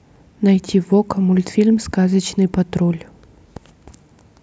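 Speech recording with no audible technical faults.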